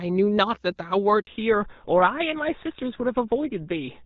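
At 1.21 s a handover gap silences the speech for 60 ms, until 1.27 s. No frames arrived while the call switched networks.

From 1.27 s to the end, the call falls back to narrowband. Nothing above 4 kHz remains. The speech turns duller and rougher than the clear HD Voice before it.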